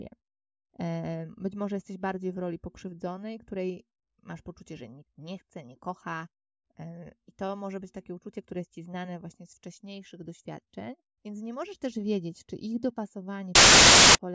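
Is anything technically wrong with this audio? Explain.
Yes. From 13.55 to 14.15 s, near the end of the speech, there is a fault of the file-tags-played-as-audio kind. A metadata block, here an embedded cover picture, has been decoded as though it were sample data. Because the image is compressed, its bytes are close to random, so the output becomes very loud white noise. It is heard as a sudden, hard-edged burst of loud static lasting about 0.6 s, starting and stopping abruptly.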